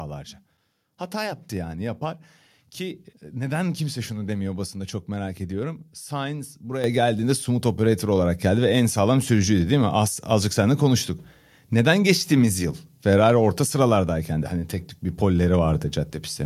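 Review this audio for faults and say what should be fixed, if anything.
At 6.84 s the microphone volume is stepped up. Speech and background noise jump together by about 7 dB in one instant. The call software judged the microphone too quiet and raised the device input level at once. To prevent it, disable automatic microphone adjustment and set a fixed input level.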